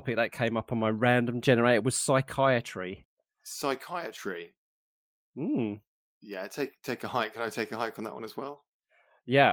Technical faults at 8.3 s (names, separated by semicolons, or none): none